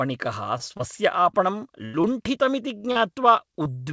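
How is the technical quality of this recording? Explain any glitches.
The recording has recurring packet-loss dropouts throughout, over a call path whose sound stops at 8 kHz, which fits G.722 at 64 kbps.

Short concealed packet loss occurs at 0.58, 0.77, 1.31, 2.01, 2.78, 2.92 and 3.63 s. Each time about 20 ms of audio (40 ms at 2.92 s) failed to arrive. The decoder extended the preceding sound to cover it, leaving a brief smear or wobble rather than an audible gap.

The burst of packet loss runs from 1.85 to 1.95 s, where about 80 ms went missing at once. Here the concealment has to stretch much further and fades as it goes, so a held buzz or dying hiss is audible before the speech jumps ahead.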